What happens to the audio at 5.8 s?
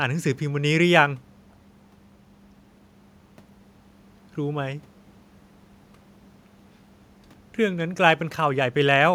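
Nothing goes wrong at 5.8 s; the speech carries on intact there, with only the quiet room noise sitting about 37 dB below it.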